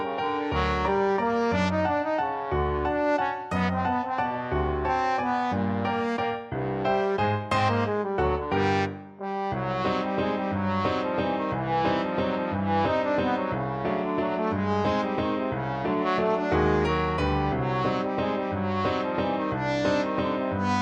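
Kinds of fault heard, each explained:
No technical faults can be heard anywhere.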